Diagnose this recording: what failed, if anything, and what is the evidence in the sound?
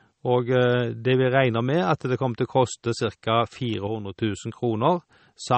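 MP3 compression, throughout this speech: the treble stops dead at 8.4 kHz and the sound is watery and swirly, with plainly audible codec damage that fits a low bitrate near 32 kbps. At the codec stage, the encoder likely starved for bits, cutting the top band and toggling weak frequency lines frame to frame.

Electrical switching spike at 3.74 s: a sharp snap sits on top of the sound, far too brief and abrupt to belong to the speech. In the analogue wiring, this is likely a nearby switch or static discharge arcing and being picked up on the audio line.

One channel drops out from 3.87 to 4.16 s: the level falls abruptly by about 6 dB, then returns. That step is the signature of one stereo channel vanishing before a mono sum, likely a brief failure in the wiring or the converter feeding that side.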